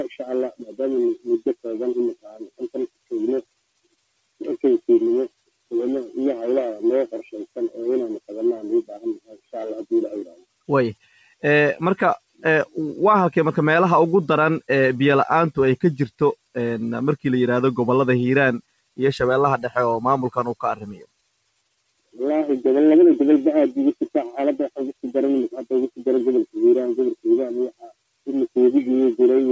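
From the start to the end, a noise suppressor built for speech is applied to the sound. It treats sustained tones and decaying tails as noise, so its gain keeps shifting by roughly 5 dB. The level audibly pumps and thins. On a waveform the envelope breathes unevenly. On a spectrogram, sustained partials fade and recover while onsets stay bright. Above 8 kHz the spectrogram is empty, which fits the G.722 wideband call path.

Within that, there are stretches of sound cut by the noise suppressor: 1.6–5.71 s, 7.47–12.75 s, 16.1–16.56 s, 18.62–19.71 s, 20.75–22.18 s and 24.93–28.56 s. In each, the suppressor clamps down hard on held or fading material, by about 21 dB at its deepest. The affected portions add up to roughly a second and a half in each of the first two stretches and less in the later ones. Tails stop short and sustains sink, while attacks mostly come through. On the waveform the envelope collapses abruptly after transients. 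On the spectrogram, harmonics are truncated into dark gaps.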